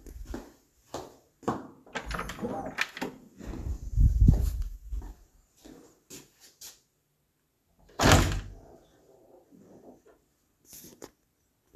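No technical faults occur at any point in the audio, so there is nothing to describe in time order.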